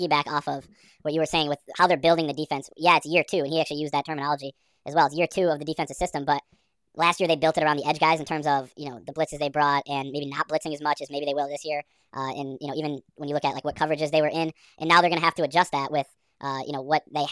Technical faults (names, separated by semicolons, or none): wrong sample rate